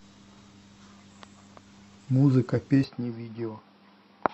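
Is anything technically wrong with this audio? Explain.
Yes. At 2.84 s the speech turns dull and boxy until the end, with nothing above 5.6 kHz. It drops a few decibels, with a new noise floor far below the speech and no gap at the change. This is likely an input switched to a poorer device.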